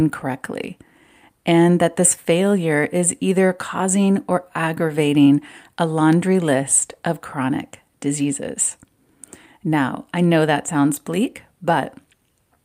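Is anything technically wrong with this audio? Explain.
No, nothing technically wrong can be heard here.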